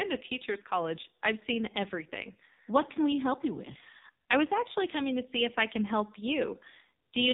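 Right through the speech you can hear the AMR narrowband mobile codec at work: nothing above 4 kHz, and a heavy buzzy, synthetic edge that fits a low 5.9 kbps mode.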